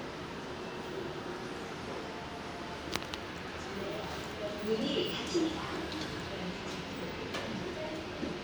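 A recording of everyday sounds, with nothing technically wrong with it.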